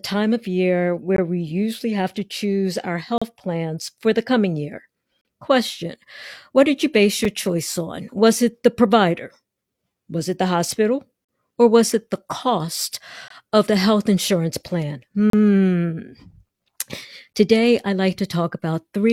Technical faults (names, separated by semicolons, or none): gap between stream segments